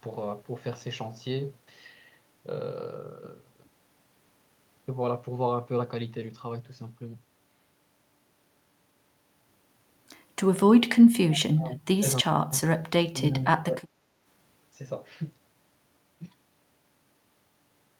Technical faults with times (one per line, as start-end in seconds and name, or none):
10.77-10.89 speech suppressed in double talk
11.54-12.60 speech suppressed in double talk
13.11-14.01 speech suppressed in double talk